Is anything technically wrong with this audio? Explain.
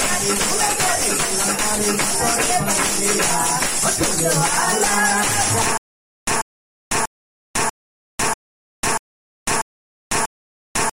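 Yes. From 5.78 s to the end, the audio falls into a stutter with silent gaps: a 142 ms burst repeats 8 times, each followed by 499 ms of digital silence, so it recurs every 640 ms. The likely cause is a stalled player or stream replaying its last fragment at each retry, losing everything that should have followed. On a waveform, identical short blocks sit between flat silent stretches; a spectrogram shows matching slices separated by empty black columns.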